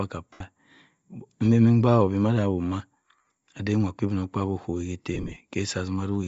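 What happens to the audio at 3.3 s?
Lost LE Audio frames hit between 3.16 and 3.31 s, just before "ade inwa". Roughly 105 ms of frames drop out across that 150 ms stretch, with the longest gap around 40 ms. The decoder repeats the last spectrum with scrambled signs, so the speech smears into a brief noisy hiss. On a spectrogram, the last frame's spectral shape smears forward as grainy noise. On the waveform, the envelope flattens.

Under this, a breathy, grainy upper band runs through the whole clip, likely from Bluetooth LC3 compression at a low bitrate. It shows as a noise-filled top end on the spectrogram.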